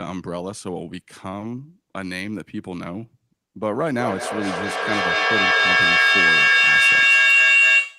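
At 1.39 s a syllable hangs for a moment too long, about 50 ms in all, with a faint buzzy smear before the speech picks up exactly where it left off and nothing is skipped. This is a short stall from a late packet. The jitter buffer ran dry, so the receiver stretched the last sound by roughly 20 ms until the packet arrived, and the playback delay grew by about 20 ms.

From 3.99 s to the end, a piercing tone rises out of the speech, centred somewhere around 3 kHz and pulsing roughly every fifth of a second, until it peaks about 10 dB louder than the talker. This is a feedback howl. Two devices on the same call share a room, so each pass from microphone to loudspeaker and back adds level. The repeats narrow to the frequency the loop favours, and the howl never breaks before the audio ends.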